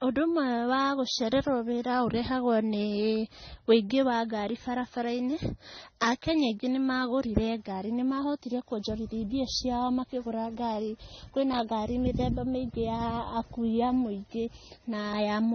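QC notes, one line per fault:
Throughout: transcoding between lossy codecs, likely MP3 then AAC-LC at low bitrates; stacked smearing and warbly artefacts, with the spectrogram showing nothing above 6.3 kHz.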